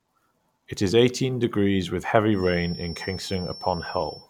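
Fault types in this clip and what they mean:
feedback whistle: a thin, steady 5.4 kHz tone sits well below the speech from 2.3 s, likely from a loudspeaker-microphone loop at the feedback point.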